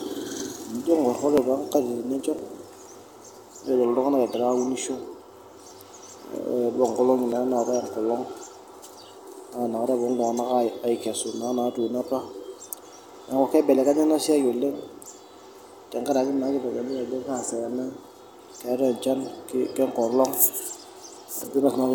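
Short skips fall at 0.40 s, 1.38 s, 2.39–2.41 s, 4.34–4.36 s, 5.32–5.35 s and 7.32–7.35 s. This is overlap between stream segments on a 1-second grid: overlapping timestamps led the player to discard 16 to 27 ms of real speech, so the waveform jumps instead of leaving the silent gap of a dropout.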